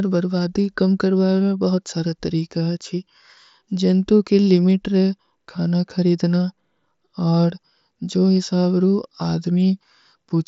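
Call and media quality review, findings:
No findings for this call and media quality review: the speech arrives over the Bluetooth mSBC headset link with no faults to report.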